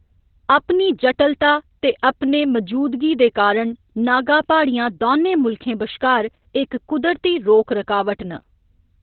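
Heavy Opus voice compression runs through the whole of this speech clip. The encoder has dropped to its SILK linear-prediction mode in narrowband, which fits a bitrate around 8 kbps. Nothing survives above 4.2 kHz, so the voice sounds dull and telephone-like. With so few bits for the excitation, the speech also turns hoarse and slightly robotic, its texture rebuilt coarsely rather than carried through.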